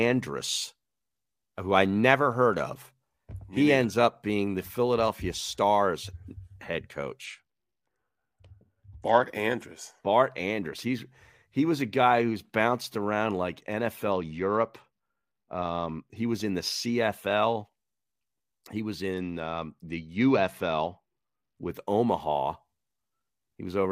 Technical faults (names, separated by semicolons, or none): Bluetooth SBC bit pool drop